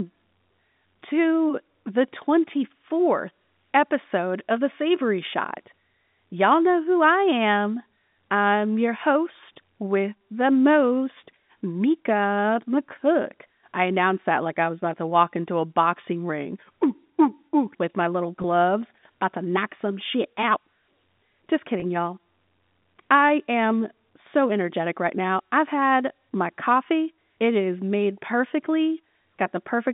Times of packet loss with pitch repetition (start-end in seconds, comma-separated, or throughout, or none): 18.42-18.44, 21.80-21.82